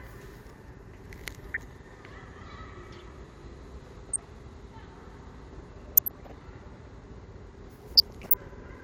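Weak reception lets a few tenths of a percent of bit errors slip past error correction into the MP2 data, throwing single sub-bands' levels off frame by frame. This DAB burbling puts short blips of noise over the sound at 1.54–1.92 s, 4.09–4.28 s, 5.92–6.53 s and 7.95–8.43 s.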